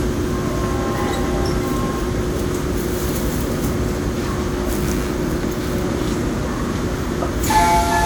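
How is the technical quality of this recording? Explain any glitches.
The recording has two clear problems: a smeared, degraded texture across the whole clip and a buzz in its second half.

Generation loss affects the entire clip. The sound is swirly and hollow, with blurred attacks and a watery smearing that seem worse than one encode at a moderate bitrate would cause, even though content reaches up to about 20.1 kHz. The likely cause is repeated lossy re-encoding, consistent with roughly four passes through WMA at around 96 kbit/s. Each pass requantises on a shifted frame grid, so noise and spectral gaps pile up.

Computer activity noise starts at 4.82 s and continues to the end. It is a buzzy, pulsing chatter at about 100 pulses per second, sitting about 25 dB below the main sound. It follows no event in the audio itself. Changing load from a processor, graphics card or mouse modulates the ground shared with the audio circuit, and that current fluctuation leaks into the signal as this rhythmic interference.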